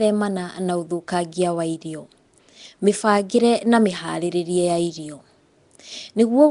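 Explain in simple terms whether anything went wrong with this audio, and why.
Something did go wrong, and it lasts from the very start to the end. The speech has a rough, hissy halo around it and a smeared, underwater quality, and nothing is left above about 10.6 kHz, so it sounds dull as well as gritty. The likely cause is Nellymoser compression, the old Flash microphone codec. It packs sound into short blocks with very few bits each, so weak parts of the sound get nothing and are filled in with noise.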